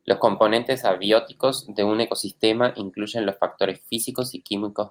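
No technical faults can be heard anywhere in the recording.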